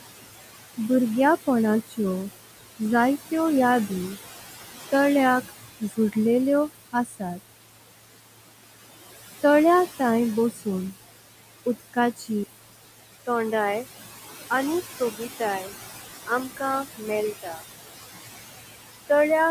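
A noise suppressor runs through the whole recording, pulling what it judges to be steady background down by about 16 dB. The room noise, about 13 dB below the speech, drops away between phrases and comes back underneath them.

The same suppressor mistakes parts of the speech for noise and turns them down with the background, cutting speech. This happens from 5.8 to 6.16 s (about 12 dB deep), from 6.92 to 7.22 s (about 15 dB), just after "तळेय थांय" from 10.51 to 10.66 s (about 10 dB), and from 12.17 to 12.29 s (about 11 dB). In each place syllable edges and endings sound swallowed for a fraction of a second.

At 12.44 s an 80 ms gap opens, and from there to the end the input has likely switched to a poorer device. It passes a narrower band, so the sound turns dull and boxy. It is also a little quieter and carries a faint new noise floor.

The suppressor cuts speech once more from 17.42 to 17.62 s, about 14 dB deep, briefly smothering the narrowed sound.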